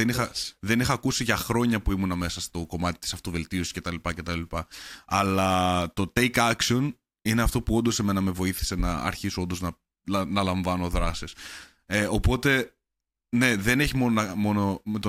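No technical faults are audible.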